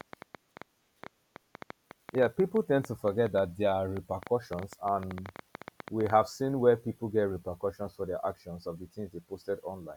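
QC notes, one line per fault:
0.01–6.11 s, train of clicks: irregular, similar-shaped ticks and pops, about 7.6 per second and roughly fifty in all, peak about 10 dB above the speech and stop just before "seen where people get"; likely interference from nearby equipment or a faulty connection or power supply injecting pulses.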